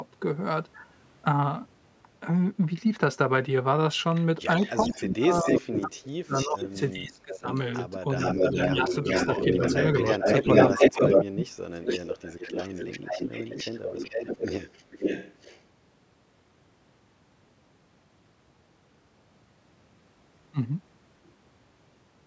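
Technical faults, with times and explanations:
4.59–7.61 s, 8.17–11.24 s and 11.83–15.61 s, echo leak: a delayed copy of the speech trails the original by roughly 0.41, 0.42 and 0.44 s. It sits about 10 dB under the speech in the first and third stretches, but in the middle one it's about 5 dB louder than the speech itself. That's likely a far-end speakerphone whose echo canceller didn't fully strip what its mic picked up, so the leftover got sent back down the line.
4.83–7.47 s, 8.13–9.59 s and 10.72–12.02 s, speech suppressed in double talk: the main talker dips while the other side is speaking too. It's heavy in the first stretch, dropping up to about 25 dB over roughly two seconds, and deepest in the last, where it falls around 35 dB for about a second. The middle one is a brief dip of about 5 dB. The echo canceller most likely couldn't tell the talker from the loudspeaker echo and turned both down together.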